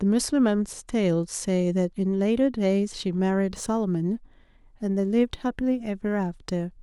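From about 3.47 s to the end of the speech, there's sample clock jitter: the converter's clock wobbles, so each sample lands a touch early or late, by something on the order of a microsecond and a half. The timing slip turns into an amplitude error wherever the waveform moves fast, so you hear a faint grainy hiss riding on the louder and brighter parts, sitting roughly 45 dB below the signal and dropping away in the pauses.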